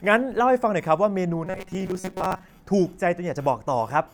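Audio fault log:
1.47 to 2.54 s, robotic sound from repeated short buffers: the speech turns into a rigid, metallic buzz pitched at 188 Hz that still roughly tracks the words. The likely cause is audio arriving too seldom, with the playback side looping a slice of about 5.3 ms, one over the buzz frequency, to fill the gaps. Most of this stretch is those repeats rather than new speech.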